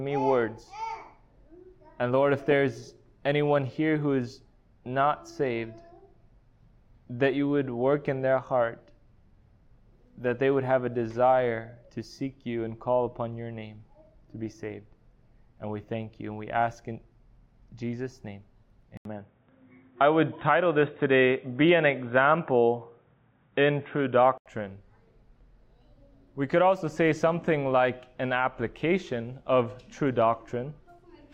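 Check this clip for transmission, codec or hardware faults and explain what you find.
One fault: from 18.97 to 24.46 s the sound goes dull with nothing above 3.8 kHz, an 80 ms gap and faint new hiss, likely an input switched to a poorer device.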